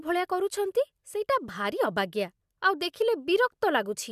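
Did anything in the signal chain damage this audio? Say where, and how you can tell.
No, no signal-chain damage detected.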